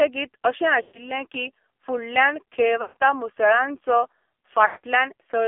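The whole clip runs through the AMR narrowband mobile codec, and it's heavily squeezed. The speech sits in a thin telephone band from about 250 Hz up to 3.4 kHz, with nothing on top. It has that buzzy, synthetic edge you get when a vocal-tract model is driven by very few pulses, which points to one of the lowest AMR-NB modes, around 5.9 kbps.

Then there are three bursts of lost AMR speech frames, at 0.82 to 1.09 s, 2.82 to 3.03 s, and 4.66 to 4.86 s. Each time the frames didn't arrive intact, so the decoder kept replaying the last good pitch and vocal-tract settings at a falling level. You hear the sound smear out and sag toward silence. The gaps are about 120 ms, 140 ms and 180 ms, so the last one fades furthest before the speech comes back a bit rough.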